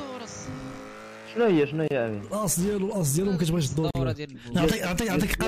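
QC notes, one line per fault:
1.88–1.91 s and 3.91–3.95 s: gap at a join of encoded pieces. The sound drops out for about 30 ms and then 43 ms, at a regular 2.0 s spacing, and resumes exactly where it left off. This points to separately encoded segments joined without trimming, so each piece's encoder start-up delay and padded final frame leave short silences at each join. The edges are smeared by the codec.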